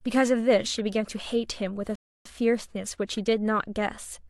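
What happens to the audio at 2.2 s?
At 2.2 s the speech sits inside a rebuffering stall, silent from 1.95 to 2.26 s. Playback ran dry and paused. It resumes exactly where it stopped, adding 0.3 s.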